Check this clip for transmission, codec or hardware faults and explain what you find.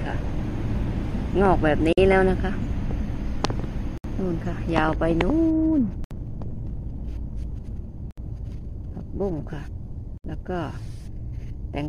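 There is one fault, repeated five times. Gaps at a join of encoded pieces appear at 1.93, 3.98, 6.04, 8.11 and 10.18 s, one roughly every 2 s. Each is a silence with smeared edges of about 49 ms the first time and 67 ms after that. Separately encoded 2-second pieces were joined with their encoder start delay and final-frame padding left in, so the sound stops and then resumes where it left off.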